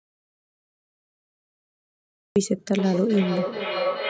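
From the very start the speech is absent: an audio dropout to silence is already under way and lasts until 2.36 s. The gap is silent, with no room tone or hiss at all, which sets it apart from a quiet pause or a noise gate closing, where some floor usually survives. The likely cause is lost input, such as a disconnected device or a failed link, while the recorder kept writing silence, so whatever was said then is gone.

From 2.78 s to the end, a feedback howl builds around roughly 500 Hz, reaching about 5 dB below the speech level. Its repeats come roughly 400 ms apart, the round-trip delay of a microphone-to-loudspeaker loop between two devices on the same call. Each pass comes back louder and narrower rather than decaying, which distinguishes it from an ordinary echo, whose repeats fade and keep the full character of the sound. The band-limited quality of the call path, with nothing above 8 kHz, carries through the howl.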